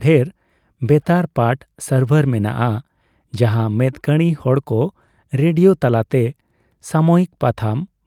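No technical faults are audible.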